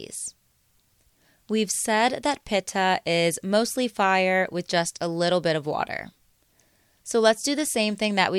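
Nothing in this speech recording stands out as a technical problem; there's no fault to point to at any moment.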